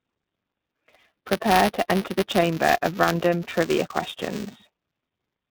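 The whole clip runs through the iLBC codec, so everything above 4 kHz is gone and the speech has that slightly rough, synthetic edge. The codec damage is plainly audible, and the 30 ms framing fits iLBC's 13.33 kbps mode.

Buffer tearing runs the full length too. The writer and the hardware read pointer keep crossing, so a small sliver of each buffer, a few percent, is stale audio from a lap earlier. That gives a steady 345 Hz buzz under the speech, which fits a 128-sample buffer.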